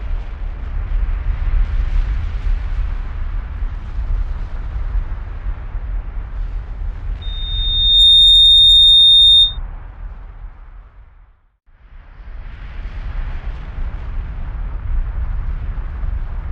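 Loudspeaker feedback squeal takes over from 7.21 s to 9.58 s, a single tone at 3.7 kHz that swells up over something like the first three quarters of a second and then sits roughly 15 dB above the rest of the audio. What's happening is the mic is hearing the speaker it feeds, and at 3.7 kHz the loop gain tipped past one, so that frequency just kept feeding itself.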